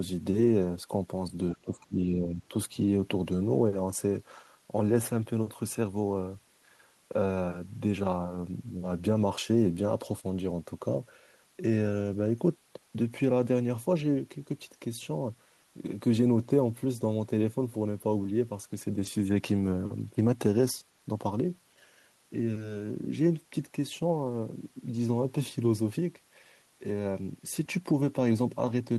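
Other side's voice leaking through at 1.50 to 1.54 s: in this speech recording a brief, faint scrap of a second voice surfaces, around 25 dB below the main talker. The likely cause is an echo canceller on a loudspeaker-and-microphone device that left some of the far end's playback in the outgoing signal. At this level and length it registers as a faint ghost under the talker rather than a clear second voice. Speech suppressed in double talk follows immediately, from 1.55 to 2.53 s. The talker's own level sinks in patches totalling about 0.7 s, reaching roughly 20 dB at its deepest. That pattern likely comes from the same echo canceller meeting both sides talking at once. Unable to separate the near voice from the loudspeaker echo, it pulled the whole signal down, taking the wanted speech with it.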